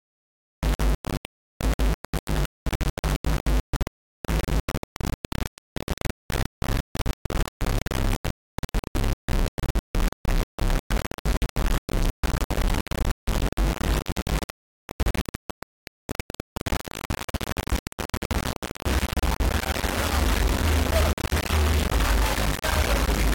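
Low bit depth without dither runs throughout: a gritty, grainy distortion that tracks the sound, likely from rounding to about 3 bits, leaving error nearly as loud as the signal.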